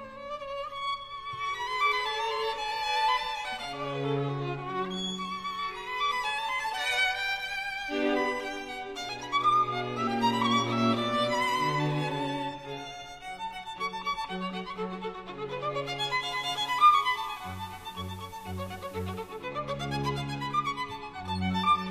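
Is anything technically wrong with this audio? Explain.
Yes. From 16.13 to 19.53 s, digital radio blending to analogue: the receiver lost the digital stream and cross-faded over 379 ms to FM, raising hiss roughly 25 dB below the signal and dropping level about 1 dB.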